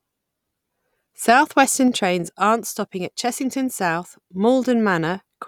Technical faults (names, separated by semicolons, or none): none